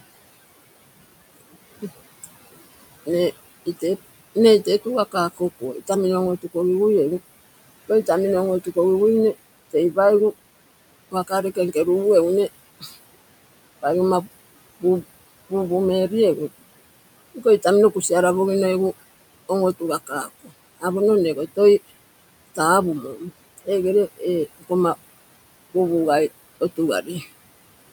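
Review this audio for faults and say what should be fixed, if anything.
Noise suppressor artifacts run through the whole clip. The suppressor pulls down every band it judges to be steady noise, by about 19 dB, frame by frame. The background sinks between phrases and rises again under speech. The room noise sits about 17 dB below the speech. A gentler reduction depth with slower gain changes would prevent this.

Speech cut by the noise suppressor happens in six stretches: 1.82–6.55 s, 9.70–11.76 s, 12.79–16.11 s, 17.35–18.11 s, 19.49–24.71 s and 25.74–27.27 s. The suppressor mistook quiet speech for noise and turned it down by about 13 to 21 dB. Soft consonants and endings sound swallowed or faint. Each stretch loses roughly 150 to 700 milliseconds in total, and the longest loss is in 19.49–24.71 s. A better speech-presence detector that protects low-level speech would prevent this.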